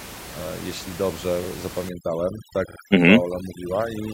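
Overdone noise removal sets in at 1.89 s and runs to the end. Before that point the room noise sits about 15 dB below the speech. From 1.89 s the noise reduction is clearly set too strong: bands that come close to its estimate of the noise are pushed down or cut out entirely, and the quieter parts of the speech are removed with them. The background drops and breaks up into twinkling specks.

Repeated frames occur from 2.67 to 2.77 s. The same 46.4 ms block of sound plays two extra times, which points to a single compressed frame being written or sent more than once. The decoder therefore plays back an identical sliver of audio in succession, heard as a short stutter. The repeats add 92.9 ms to the audio.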